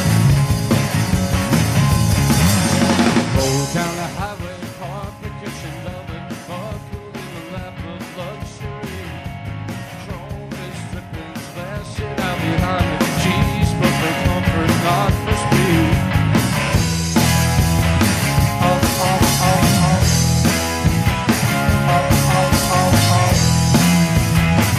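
Zipper noise runs from 11.67 to 12.69 s: the level moves by roughly 10 dB in unsmoothed 2 dB steps, about seven per second, each step producing an audible tick.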